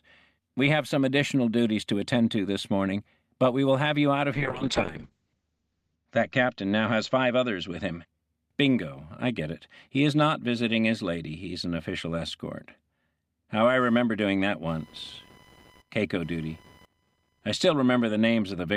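The audio has two technical faults. From 4.34 to 8.13 s there is a call bitrate drop. The encoder's rate falls from 48 kbps to 8 kbps and stays lowest for about 1.6 s. Bandwidth shrinks from 20 kHz to 8 kHz, so the sound turns muffled and coarse before recovering. From 13.80 to 17.86 s, computer activity noise appears as a chirping, buzzing layer. It pulses at around 1 kHz, roughly 30 dB below the signal. Processor or graphics load is modulating the shared ground of the audio circuit.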